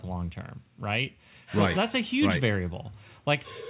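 Listening through this speech clip, nothing stood out, with the audio band-limited to about 4 kHz as expected from its G.711 A-law call path.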